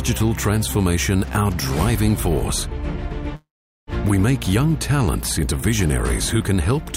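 At 3.35 s the sound turns into a short, decaying continuation of the last sound, then drops to about 0.42 s of silence before resuming at 3.90 s. Roughly 0.52 s of material is gone, which points to a likely long network dropout with the receiver concealing the gap.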